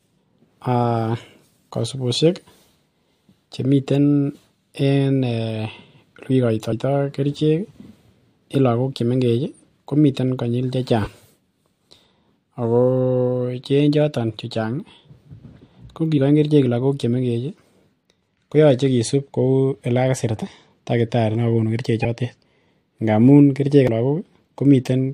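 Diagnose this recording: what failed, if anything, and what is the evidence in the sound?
Codec stage: compressed frames skipped at 6.69, 11.03, 16.14, 22.01 and 23.87 s. Speech jumps ahead by a few tens of milliseconds, about a fifth of a second last.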